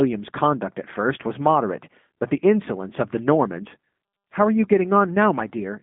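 The speech has been carried through a G.729 codec for its whole length, with a character that fits the G.729A variant at about 8 kbit/s. The codec rebuilds the voice from a vocal tract filter, a pitch predictor and a few pulses per short frame instead of sending the waveform, so the result sounds plainly rough and synthetic. The line passes roughly 150 Hz to 3.5 kHz, with nothing above 3.6 kHz, which leaves the sound thin and muffled.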